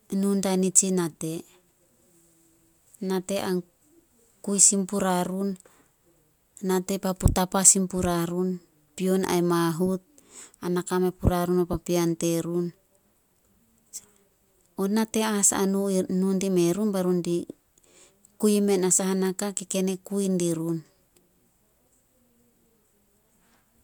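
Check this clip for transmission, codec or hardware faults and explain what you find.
No transmission, codec or hardware faults are audible, and the speech signal holds steady and continuous throughout.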